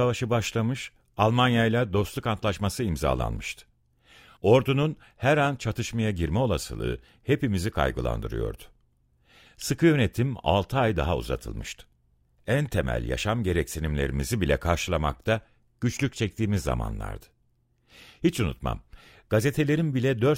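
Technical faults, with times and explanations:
No technical faults detected.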